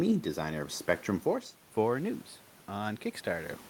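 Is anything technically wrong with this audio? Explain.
Yes. From 1.74 s to the end, there is automatic gain rising. After the input level fell by about 15 dB, the gain control judged the signal too quiet and slowly raised its gain to compensate, so the level climbs gradually rather than jumping back. What separates this from a talker moving, as heard around 1 s and near 3.5 s, is that the room noise swells along with the voice, because the whole signal is being amplified.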